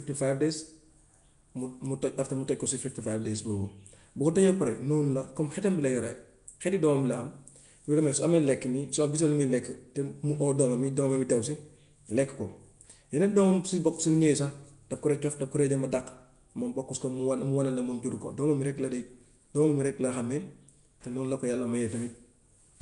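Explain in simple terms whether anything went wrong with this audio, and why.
Throughout the whole recording the speech carries a rough, hissy haze around it and sounds smeared, a bit as if heard underwater, with nothing at all above about 10.6 kHz. This is most likely Nellymoser compression, the old Flash microphone codec. It squeezes sound into short blocks with very few bits, so quieter parts of the sound get nothing and are filled in with noise, which creates that fizzy, blurred quality.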